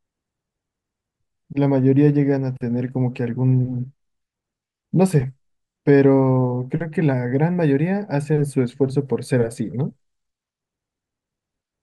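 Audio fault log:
No audible faults detected.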